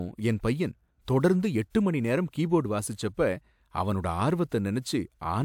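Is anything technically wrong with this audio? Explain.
No, nothing technically wrong turns up anywhere in this speech recording.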